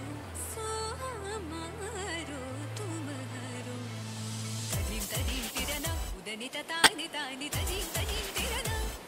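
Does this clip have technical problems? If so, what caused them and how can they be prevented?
Yes. A corrupt frame was decoded between 6.79 and 6.90 s. For about a tenth of a second, a harsh burst cuts through the sound. It peaks loud, around -10 dBFS. Damaged bits in the compressed stream made the decoder rebuild the audio with wrong gains and codes. That put energy at the wrong frequencies. The length fits a short run of roughly five frames. To prevent it, use error detection in the stream and conceal or drop frames that fail their checks.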